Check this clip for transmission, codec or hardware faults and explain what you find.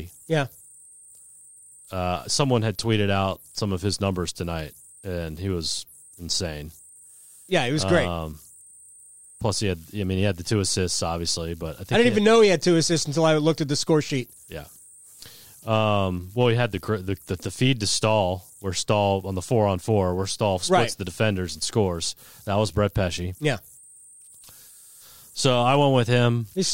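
One hardware fault is present. Throughout the recording, converter idle tones appear: an undithered delta-sigma converter locks into repeating bit patterns at low input, producing tones around 10 kHz, about 30 dB below the speech.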